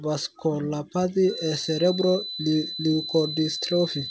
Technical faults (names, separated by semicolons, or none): feedback whistle